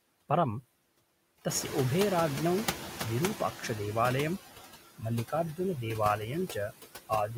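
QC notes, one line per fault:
Throughout: noise suppressor artifacts. The suppressor is pulling down whatever bands it judges to be steady background, frame by frame, by about 17 dB. You hear the noise floor duck in the gaps and climb back up underneath the talking, so the background pumps along with the speech.
1.49–3.88 s: noise suppressor catching up. The room noise jumps by about 13 dB at around 1.5 s, ending up roughly 11 dB under the speech. The suppressor's noise estimate is still tuned to the quieter background, so the louder noise leaks through with only about 10 dB of reduction. Over roughly 2.4 s the estimate catches up and the background sinks back down to the deeper cut.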